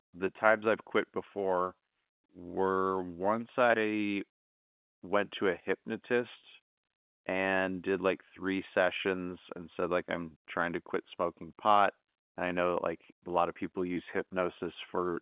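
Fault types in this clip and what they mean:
Nothing here counts as a fault; the speech simply carries the narrow, band-limited character you'd expect from an ordinary phone line.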